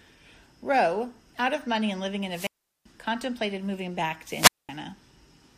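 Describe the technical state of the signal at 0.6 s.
Nothing is wrong with the signal at 0.6 s, where the speech runs intact with no audible fault.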